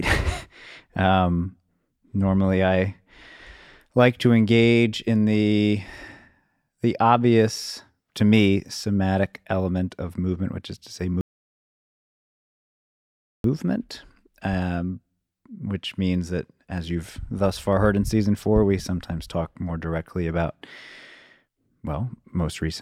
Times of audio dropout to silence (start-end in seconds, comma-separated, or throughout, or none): 11.21-13.44